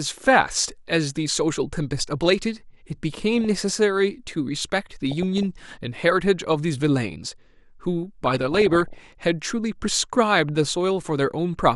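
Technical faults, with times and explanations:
throughout, MP2 compression: Too few bits are spread across the coder's 32 sub-bands, so upper bands switch off and the remaining ones are coarsely quantised. The speech sounds dull with a gurgling, grainy edge. This is likely MPEG Layer II, with damage that fits a rate of around 80 kbps.
3.41–3.55 s, 5.11–5.43 s and 8.26–9.24 s, DAB burbling: Bit errors slip past error correction and corrupt samples and scale factors, so single sub-bands get short blips of noise and jump in level for up to a frame. Errors are sparse at first and grow denser, so the last and longest burst is the worst.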